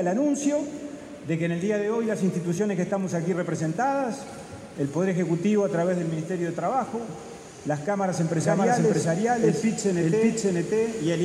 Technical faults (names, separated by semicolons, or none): doubled audio track